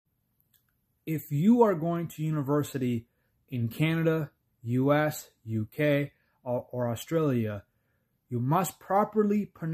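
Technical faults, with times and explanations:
No technical faults are audible anywhere in this speech recording.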